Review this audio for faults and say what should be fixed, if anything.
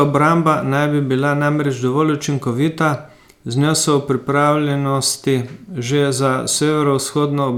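Nothing in this speech recording needs fixing, as no technical fault can be heard anywhere in it. There are no times to flag and no prevention step to recommend.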